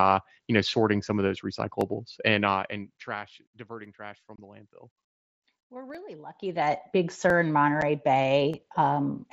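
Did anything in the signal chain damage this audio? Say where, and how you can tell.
Yes. Dropped samples at 0.69 s (between "you know" and "some of those"), 1.81, 3.85, 5.95, 7.30 and 8.54 s: each is one sharp click, likely from a driver or buffer glitch skipping under a millisecond of waveform.

Unconcealed Bluetooth headset packet loss at 4.36 to 4.38 s, just before "the landfill", and at 7.81 to 7.83 s: the wireless link lost 22.5 ms and 7.5 ms of speech, leaving abrupt holes.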